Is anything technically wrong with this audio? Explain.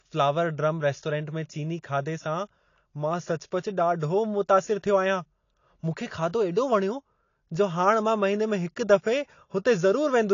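Yes. Low-bitrate audio saved at a high bitrate runs throughout. Nothing reaches above 7.2 kHz, so the speech sounds dull and band-limited. This likely comes from a low-bitrate encode re-saved at a high bitrate, which cannot restore the high frequencies the first codec discarded.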